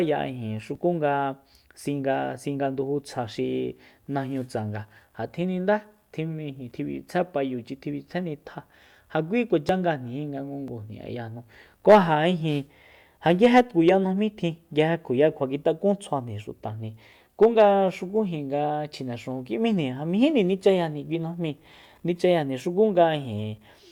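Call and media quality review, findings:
Overlap between stream segments: six tiny clicks/skips in the speech at 0.75, 3.73, 6.71, 7.70, 9.69 and 10.68 s. The segment-joining stage in the player trims overlapping timestamps from audio that was never actually duplicated, dropping roughly 5 to 13 ms and leaving a waveform jump. Unlike packet loss, there's no silent gap or concealment smear. Events fall near a 1 s segment grid, which fits 1.0 s segments.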